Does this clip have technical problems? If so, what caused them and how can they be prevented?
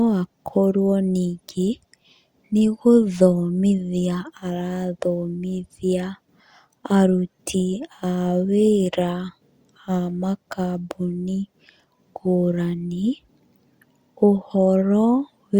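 No, the speech signal shows no technical faults anywhere in the recording, so there is nothing here that needs a cause or a prevention step.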